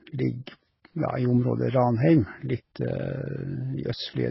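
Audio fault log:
Throughout: transcoding between lossy codecs. Nothing sounds above 5.6 kHz, and the speech carries two distinct layers of artefact: smeared, swirly coding noise plus a second, differently textured graininess on top. This is likely a very low-bitrate AAC-LC encode re-encoded to Vorbis around 30 kbit/s, unlike single-codec damage, which has one character.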